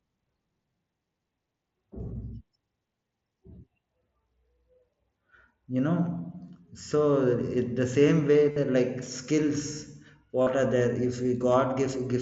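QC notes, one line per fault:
8.51–8.56 s and 10.42–10.47 s, concealed Bluetooth headset packet loss: two runs of lost voice packets, about 52 ms and 45 ms long, which fits roughly seven and six consecutive mSBC frames. The receiver filled each gap by repeating the best-matching recent stretch of waveform, so each run sounds like a short buzzy, pitched tone held at full level, with a slight warble as real audio resumes over the band-limited mSBC path.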